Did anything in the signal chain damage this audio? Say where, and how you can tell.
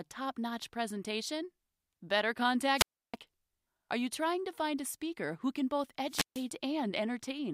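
Yes. The speech cuts out twice, at 2.75–3.16 s and 6.07–6.47 s, each a hole of near silence lasting 0.32 s and 0.15 s. That is a wireless microphone squelch dropout: the analogue FM radio link faded, and the receiver's squelch muted its output until the signal recovered.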